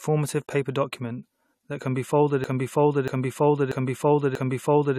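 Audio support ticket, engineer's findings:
Broken-record loop, 2.44 s to end of clip, right after "that can be folded". A 0.64 s fragment repeats back to back, four times, and never recovers. Likely a stalled player or stream buffer re-sending its last held chunk. The audio for that span is lost.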